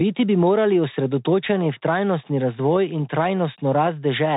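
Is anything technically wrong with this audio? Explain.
Yes. The whole clip has gone through a Bluetooth CVSD headset codec: nothing gets past about 3.8 kHz, and the one-bit, adaptive-step coding, which fits a 64 kbps stream, can't keep up with sharp high-energy sounds, so sibilants go scratchy over a grainy hiss.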